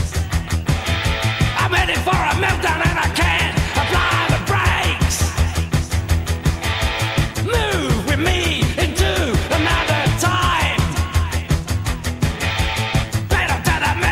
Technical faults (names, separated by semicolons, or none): none